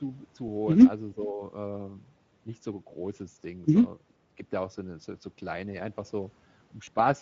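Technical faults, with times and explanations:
Throughout: Speex codec. The speech carries plainly audible coding damage, with a hoarse, grainy edge. The rate sounds like roughly 16.8 kbps, a middle setting. At that rate the CELP coder has too few bits to model the excitation cleanly, so the voicing turns noisy. Any band above 4 kHz comes through as shaped noise rather than real detail. That fill gives the top end a hissy, synthetic quality.
1.14 to 1.41 s: speech suppressed in double talk. The voice dips here by a moderate amount, around 5 dB at its deepest, over roughly a third of a second. It sounds pushed back rather than cut off. The likely cause is an echo canceller reacting to both sides talking at once. Unable to tell its own talker from loudspeaker echo, it turned the signal down. The level recovers once the overlap ends.
6.85 to 6.89 s: VoIP packet loss concealed by the speech codec. 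A single 20 ms gap occurs here, which fits one lost frame. The decoder filled it by extending its last pitch and filter with reduced gain. That produces a brief stretched, fading sound in place of the missing sound. Because each frame builds on the previous one, the voice stays weak or distorted for a short while after the gap.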